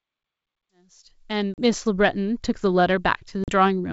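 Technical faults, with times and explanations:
1.54–1.60 s and 3.44–3.49 s, packet loss on an ADPCM call: each time about 40 ms of speech drops to a hard-edged silence, which fits roughly two lost packets. The decoder's predictor and step size then no longer match the sender's, so speech resumes with brief distortion before settling.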